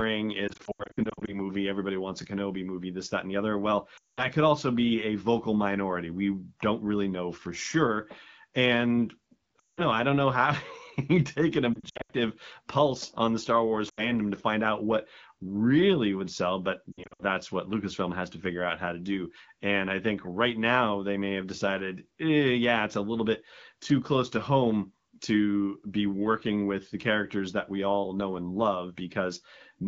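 Brief dips, warbles and drops to near silence with weak, rough recovery at 0.48–1.41 s (before "everybody wants a"), 3.97–4.26 s, 9.60–9.82 s (between "know for sure and" and "know I don't know"), 11.74–12.12 s, 13.89–14.12 s (before "to find out what") and 16.92–17.24 s. These are lost AMR speech frames, where the AMR wideband decoder stretched the last good pitch and vocal-tract settings with falling gain.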